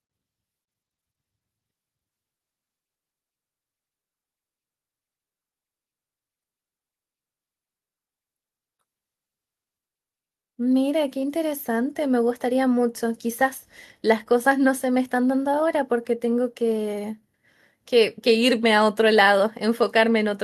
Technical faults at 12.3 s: none

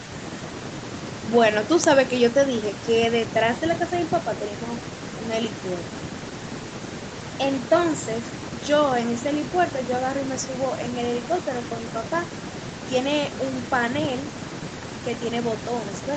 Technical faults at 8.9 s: none

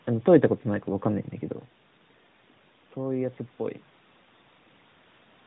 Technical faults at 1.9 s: none

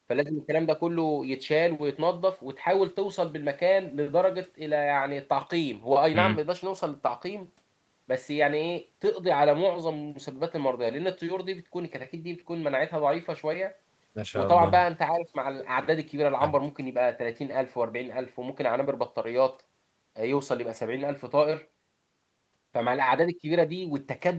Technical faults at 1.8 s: none

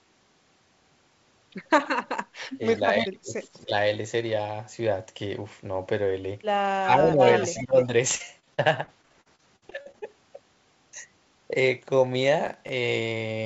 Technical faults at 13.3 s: none

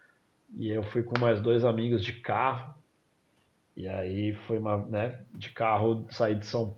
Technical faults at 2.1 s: none

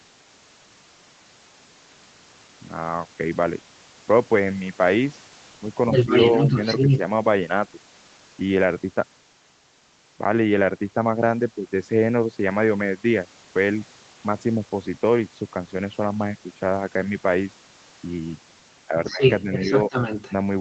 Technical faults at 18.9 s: speech suppressed in double talk

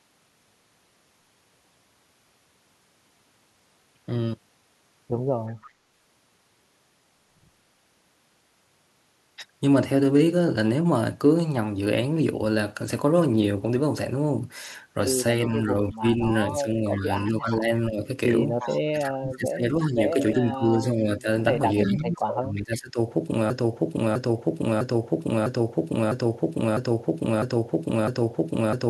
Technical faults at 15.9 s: speech suppressed in double talk; echo leak

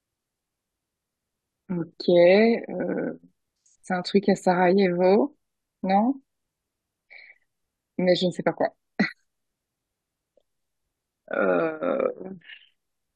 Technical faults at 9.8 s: none

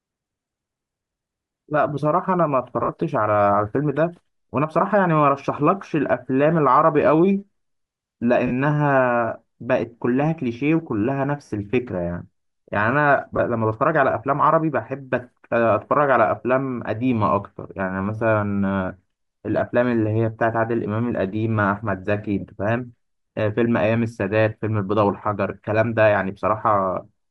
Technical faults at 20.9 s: Bluetooth LC3 compression

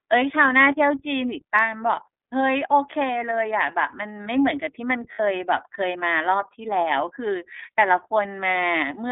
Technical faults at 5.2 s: iLBC codec; lost iLBC frames

